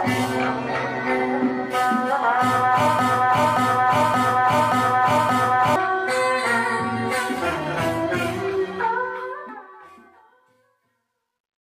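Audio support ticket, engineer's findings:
Broken-record loop, 2.99–5.76 s: a 0.58 s fragment repeats exactly five times, back to back. The audio for that span is lost. Likely a stalled player, encoder or stream resending its last buffered block. Waveform shows identical repeating blocks; spectrogram shows tiled copies.

Truncation distortion on a fade, 8.95–11.71 s: the fade-out, running from around 9 s to 11.7 s, turns gritty and is worst from 10.2 to 11.71 s. The fade stage keeps 12 bits without dither. Waveform shows square steps; spectrogram shows broadband grain in the tail.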